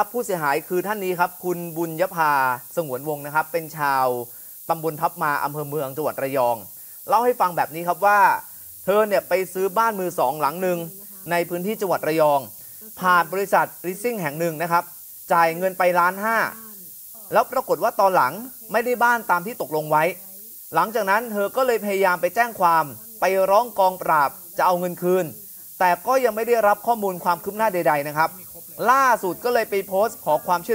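Low bit depth with noise shaping runs throughout: a 7-bit signal's rounding error is pushed upward, leaving a thin, steady hiss only about 15 dB down, strongest at the top.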